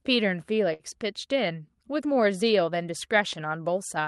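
A short stall from a late packet runs from 0.73 to 0.84 s in this speech. A packet arrived after its playout time, the jitter buffer ran dry, and the receiver stretched the sound it already had to cover the gap, about 64 ms of filler, before resuming where it left off. Nothing is lost, so the speech continues intact, but one sound is held unnaturally long, with a faint buzzy or dipping quality across the stretched part.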